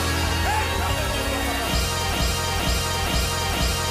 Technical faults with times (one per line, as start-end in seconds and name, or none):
2.13-3.91 broken-record loop